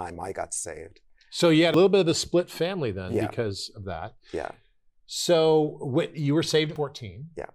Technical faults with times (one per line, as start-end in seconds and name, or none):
1.74 compressed frames skipped
6.76 compressed frames skipped